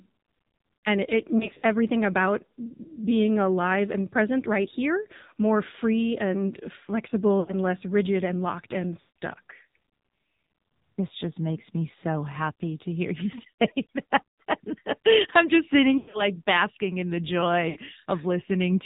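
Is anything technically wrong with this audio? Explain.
Yes. The whole recording has gone through the AMR narrowband mobile codec. It samples at 8 kHz and rebuilds speech from a vocal-tract model with sparse pulse excitation, so nothing above 4 kHz survives. The plainly audible buzzy, synthetic edge points to a low mode around 7.4 kbps.

There are also lost AMR speech frames at 1.38–1.64, 7.40–7.54, 9.00–9.14, 14.29–14.40, 15.98–16.28 and 17.70–17.77 s. Each time, the decoder filled the missing frames by repeating its last good settings at falling gain. The speech smears, warbles and dips for roughly 60 to 160 ms, for example between "more free and flexible" and "less rigid and locked", and after "I'm just sitting".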